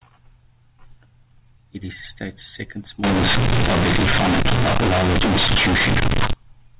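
From 3.04 s to 6.33 s the speech turns into harsh, buzzy roar: companded audio read as linear. The mu-law bytes are played as plain 8-bit samples without expansion, so every sign change flips the output across roughly half its range and quiet passages come out as loud as peaks, with heavy noise filling the pauses. Unlike simple overload clipping, the level does not track the talker; before 3.04 s the G.711 telephone band sounds normal, topping out near 4 kHz.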